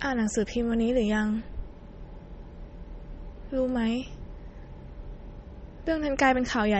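MP3 compression, throughout: nothing above 8.3 kHz and plainly audible coding damage, likely from a bit-starved encoder, consistent with about 32 kbps, cutting treble and discarding weak detail.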